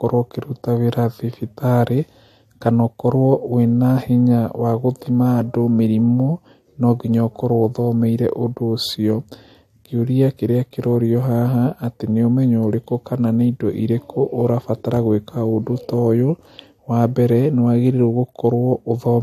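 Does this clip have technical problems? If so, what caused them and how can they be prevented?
Yes. Throughout the speech, nothing is present above 13.9 kHz, and the sound carries two layered sets of compression artefacts heard together. This points to transcoding between lossy codecs, likely an MP3 at 65 kbit/s re-encoded to AAC-LC at a similar rate. The second encoder spent its bits reproducing the first one's damage, added its own, and kept the lowest cut-off in the chain. Prevent it by encoding once from a lossless master.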